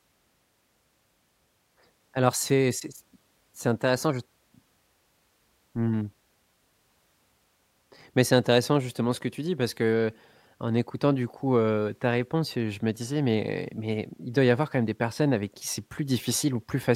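A speech recording with nothing technically wrong to point at here, just the talking carrying on without any glitch or interruption along the way.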